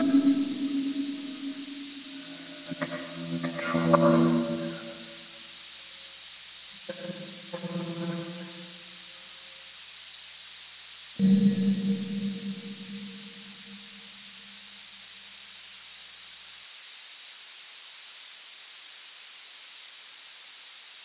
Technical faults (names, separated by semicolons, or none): none